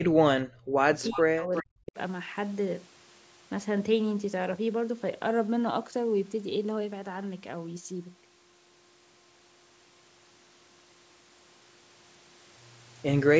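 A speech recording from a call, with trouble in its first two seconds. From 0.0 to 0.89 s and again from 1.12 to 1.97 s the speech drops sharply, by roughly 40 dB at its deepest. This is likely speech suppressed in double talk. The echo canceller was probably unable to separate this talker from the returning echo while both sides spoke, so it pulled everything down. A delayed copy of the speech surfaces at 1.02 to 1.19 s and at 1.55 to 1.64 s. It trails the original by 361 ms, at about 15 dB and then about 10 dB below the speech. This is likely an echo leak, where the far end's loudspeaker sound got past its canceller and was sent back. The band stops at 8 kHz, as expected from the call's microphone processing.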